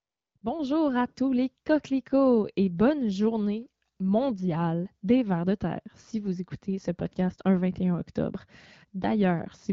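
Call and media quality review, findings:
AMR comfort noise, 0.00–0.35 s and 0.37–0.41 s: sender flagged silence and dropped speech frames. Receiver substituted smooth synthetic noise, replacing real background and gating in and out abruptly.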